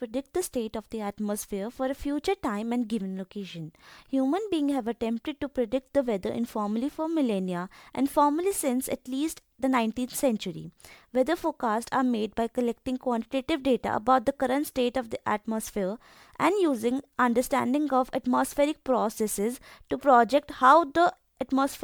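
Repeated lossy re-encoding, likely several MP3 passes at around 128 kbit/s, about seven in all, has left this speech recording with generation loss throughout. Stacked quantisation noise gives a swirly, hollow, smeared quality with blurred consonant attacks, while the spectrum stops near 20.1 kHz.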